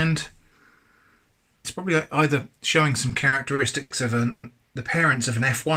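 From 3.09 to 3.92 s the sound drags and stutters: six brief hitches, the longest 80 ms, where the last sound is held and stretched before the audio moves on. These repeated stalls (stutter) add about 190 ms, nearly a quarter of that stretch, yet nothing is lost. Packets were arriving late or slower than playback, so the jitter buffer kept running dry and the receiver bridged each gap by continuing what it had just played.

At 4.30 s the sound hangs for 130 ms, the last moment drawn out as a fading buzz or hiss with no drop to silence, and at 4.45 s it resumes from exactly where it stopped, with nothing skipped. This is a call audio freeze, likely caused by packets being held up in transit. The jitter buffer emptied, the receiver continued the last sound while it waited, and the 130 ms pause became a lasting shift in delay.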